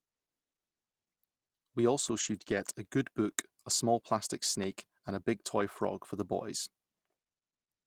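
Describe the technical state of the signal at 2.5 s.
At 2.5 s the signal is inside a lost packet rebuilt from error correction, running from 2.47 to 2.61 s. The packets there never arrived, so the decoder played the low-bitrate copies carried in the packets that followed. There is no gap, but the sound turns rougher and noisier for about 80 ms, consistent with a few 20 ms frames. On a spectrogram the harmonics blur and a grainy noise floor appears, while the waveform stays continuous with no dropout.

Immediately before, from 2.43 to 2.47 s, there is a short concealed packet loss. About 20 ms of audio never reached the decoder in time, and the receiver filled the hole by extending the preceding sound before blending back into the real signal. It is heard as a brief smear or wobble. On the waveform it shows as a continuation of the preceding sound, and on the spectrogram as a short stretch where the preceding content holds instead of moving.

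The same kind of error-correction rebuild also covers 2.03 to 2.41 s, so nearly all of the stretch from about 2.0 to 2.6 s sounds degraded.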